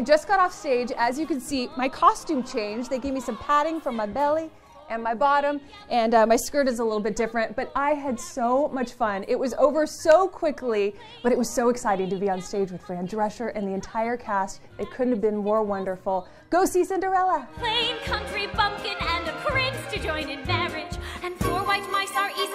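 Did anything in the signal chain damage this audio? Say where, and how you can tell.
No, no stage damaged it.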